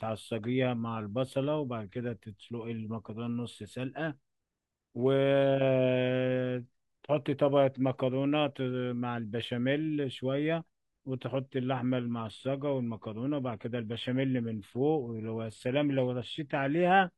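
At 11.96 s the speech drops abruptly in quality and stays degraded to the end of the clip. This is an adaptive stream at a lower bitrate: the player switched to a cheaper rendition when throughput fell, with no gap at the join. Coding artefacts rise, which points to a move from an AAC-LC stream near 96 kbit/s to a low-rate HE-AAC stream around 24 kbit/s.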